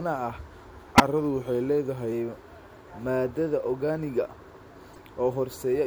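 From 0.67 to 2.12 s the speech slows by 5.8% and drops about a semitone (104 cents), then snaps back to normal. This is likely a drift correction step, where clock-matching software briefly changed the playback rate to rebalance its buffer.

Corrupt frame decoding appears three times. At 0.96 to 1.00 s, a loud burst spans a couple of damaged frames. A faint blip follows at 2.77 s. At 4.94 to 5.01 s, a moderate chirp covers a few frames. In each case the decoder played frames with flipped bits, putting energy at the wrong frequencies.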